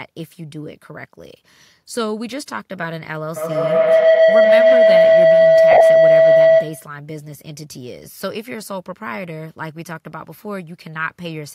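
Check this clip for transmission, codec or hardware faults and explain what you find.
Two faults are present in this speech clip: acoustic feedback and Bluetooth frame loss.

Feedback howl runs from 3.36 to 6.98 s. A microphone-to-loudspeaker loop gains level each pass, so a howl near 700 Hz builds to about 15 dB above the speech, with the loop repeating roughly every 150 ms.

Lost LE Audio frames occur from 5.71 to 5.81 s and from 10.37 to 10.39 s. The LC3 decoder conceals missing frames by reusing the last spectrum with randomised signs, which smears the sound into noise. The first gap loses 67.5 ms scattered across 90 ms, in runs of up to about 20 ms. The second loses 15 ms, consistent with two 7.5 ms frames.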